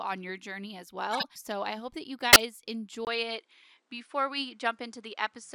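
At 1.13–1.25 s after "your journey as" and at 2.30–2.42 s after "I hope that you", a corrupt frame decoded gives a squeaky burst, seen as misplaced smeared energy across several frames. From 3.05 s, after a 20 ms gap in the waveform, the sound turns duller with a faint new noise floor and unchanged level; the spectrogram cuts off above 10.5 kHz, likely an input switched to a poorer device.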